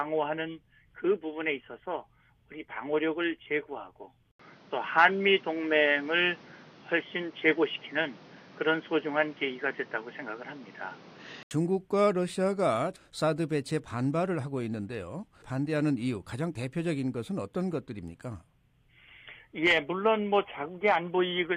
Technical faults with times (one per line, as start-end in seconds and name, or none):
4.31-11.51 input switched to a poorer device